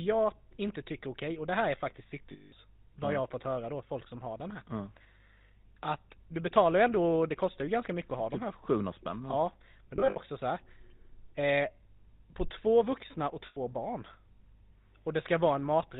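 Throughout, the speech has passed through the GSM full-rate codec, and the damage is plainly audible. At a rate that fits 13 kbps, the vocal tract is modelled as a filter excited by a sparse, regular pulse train, so voicing takes on a buzzy, gravelly roughness. Nothing above 4 kHz gets through, which leaves the speech band-limited and dull.

Lost GSM frames occur three times. From 2.32 to 2.53 s, about 200 ms of signal is missing, which fits ten consecutive 20 ms frames. The decoder repeats the last good frame's parameters, so the sound freezes into a rough, metallic ring until normal decoding resumes. From 9.96 to 10.18 s, about 120 ms is lost in several short gaps spread over roughly 200 ms. The longest gap is around 70 ms, so the ringing comes in brief, broken bursts. From 13.46 to 13.58 s, a single 100 ms loss produces the same held metallic ring.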